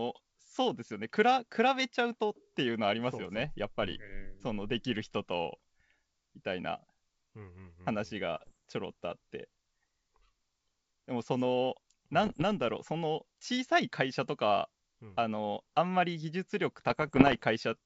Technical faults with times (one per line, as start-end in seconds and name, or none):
8.37-8.53 bit errors on an ADPCM link
12.24-12.43 bit errors on an ADPCM link
16.90-17.44 bit errors on an ADPCM link